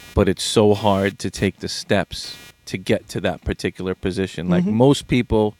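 Computer activity noise runs throughout: load changes on the computer disturb the shared audio ground, leaving a faint buzz pulsing about 200 times a second, roughly 30 dB below the speech.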